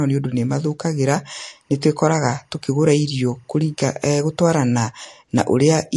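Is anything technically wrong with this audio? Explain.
Yes, there are two faults. Throughout, the speech sounds watery and swirly with nothing above 11.3 kHz, likely MP3 compression at about 48 kbps; unlike a plain low-pass, weak detail flickers between frames. From 1.28 to 4.81 s, timecode bleed adds a faint chirping warble flipping between tones near 1 and 2 kHz at a 24 frames-per-second rhythm, steady rather than following the speech.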